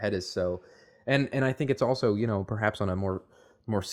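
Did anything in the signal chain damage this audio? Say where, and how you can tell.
No, nothing in the signal chain damaged this recording.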